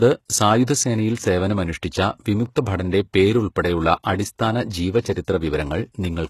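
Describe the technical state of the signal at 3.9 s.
At 3.9 s you're hearing the same damage that runs through the whole clip, which sounds very much like HE-AAC compression, likely at a very low rate around 16 kbps. The codec keeps only the lower spectrum and fakes the top by copying lower bands upward under a rough envelope, so the treble reaches high but doesn't line up with the real harmonics. S sounds come out gritty and lispy, and nothing survives above about 12.3 kHz.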